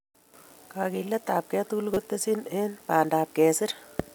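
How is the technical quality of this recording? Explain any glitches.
One glitch stands out in the speech. Corrupt frame decoded, 1.94 to 1.97 s, just before "tesyin eng": damaged bits in a single compressed frame were decoded anyway, so misread gains and codes put energy at the wrong frequencies. It sounds like a brief chirp, squeak, blip or burst of noise, peaking at about -10 dBFS.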